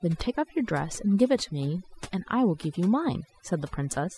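Throughout, overdone noise removal leaves near-silent gaps sprinkled with twinkling specks. Unlike a noise gate, it removes individual frequency bands rather than the whole signal.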